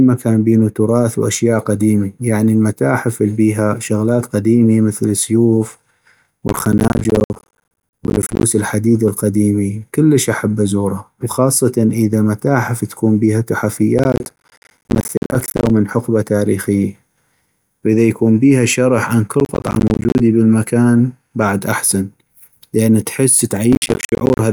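Speech with four bursts of processor overload crackle, at 6.48–8.43 s, 13.98–15.70 s (after "إذا متاحف تكون بيها"), 19.40–20.20 s and 23.73–24.39 s. Each is dense gritty tearing. Many buffers of around 10 ms miss their deadline again and again, each dropping out to hard-edged silence.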